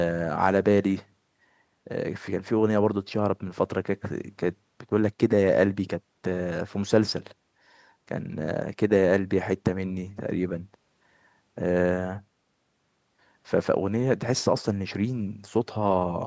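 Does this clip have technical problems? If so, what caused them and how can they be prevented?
No, nothing here is a technical fault: the speech carries the normal marks of call microphone processing, with the lowest bass trimmed by its high-pass filter and nothing above 8 kHz, so there is nothing to prevent.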